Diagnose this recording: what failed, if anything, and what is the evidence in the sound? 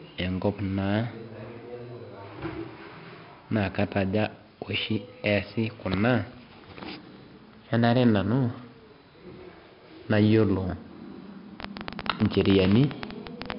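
4-bit ADPCM compression damaged the recording at the codec stage, and it affects the full clip. A gritty hiss rides on every loud stretch of speech and rises and falls with it, and sharp onsets break up because the adaptive step size cannot keep pace. Nothing is present above 5.3 kHz, which points to a low sample rate and a data rate around 44 kbps. On a spectrogram, the hard ceiling at 5.3 kHz appears with grainy noise filling in under each loud segment.

A train of clicks runs from 11.60 s to 13.53 s, about 17.2 per second at an uneven spacing. That comes to around thirty similar pulses, peaking roughly 20 dB above the speech and audible in the gaps too. The cause is likely interference coupling into the analogue wiring or a struggling interface injecting pulses, not the codec. On a waveform they show as thin, repeated spikes. On a spectrogram they appear as irregularly spaced full-height vertical lines.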